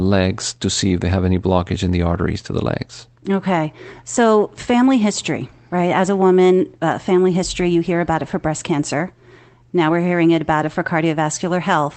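No technical faults can be heard in this speech recording. It has come through a call connection, with the usual coding texture of a call codec and high frequencies that stop at around 8 kHz.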